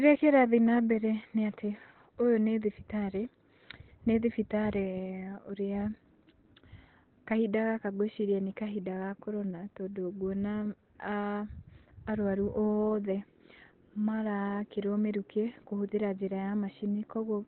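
Throughout the speech, nothing reaches above 4.2 kHz, and heavy codec damage leaves it muffled and hoarse. This is likely Opus compression in its SILK speech mode at narrowband bandwidth, which fits a rate around 12 kbps, where the encoder trades bandwidth for intelligibility.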